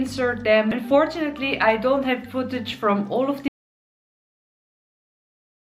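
An audio dropout to silence begins at 3.48 s and runs to the end, with no room tone, likely from a lost input, disconnected device, failed link or mute.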